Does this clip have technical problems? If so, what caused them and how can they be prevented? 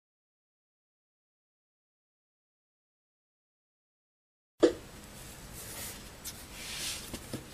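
Yes. Compressed frames are skipped at 5.92 s and 7.15 s. The sound jumps ahead by roughly 70 ms, then 100 ms, which fits three and four missing 26.1 ms frames. Use checksummed storage and verified transfers so no frames are lost or damaged.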